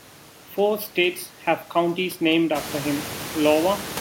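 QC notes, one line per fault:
Nothing to flag in this speech, and the room noise that comes up by about 16 dB at roughly two and a half seconds is just the space the mic is in, still sitting about 12 dB under the talking.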